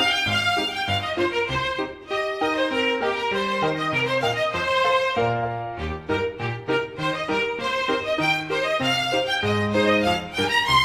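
No technical faults are audible.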